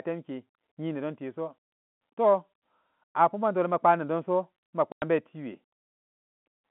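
Packet loss filled with silence at 4.92 to 5.02 s: about 100 ms of lost packets, likely five 20 ms ones, replaced by silence, cutting the speech with hard edges.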